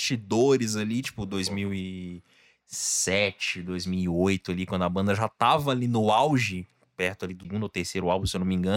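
At 7.43 s, just after "auge perto ali do", a CD skip occurs: the laser has jumped to a different turn of the disc's spiral. The player mutes very briefly, giving a small tick, then resumes from another point, so the speech lurches abruptly.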